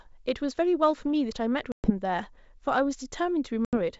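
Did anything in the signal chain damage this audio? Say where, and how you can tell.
Yes, in the network stage: packet loss on an ADPCM call. The speech drops into hard-edged silence at 1.72 to 1.91 s and 3.65 to 3.77 s, fitting roughly ten and seven lost packets. The decoder's predictor and step size then mismatch the sender's, so the sound returns slightly distorted before settling.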